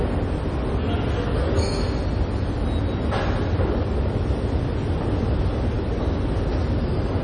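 The encoder was likely starved of bits, in the manner of MP3 compression at a low rate that fits about 32 kbps, and the damage is heavy for the whole clip. With so few bits available, the treble is cut off and nothing remains above 9.9 kHz. Weak frequency lines are dropped and restored from one frame to the next, so the sound takes on a watery, swirling quality, with metallic chirps in the bright parts and smeared attacks.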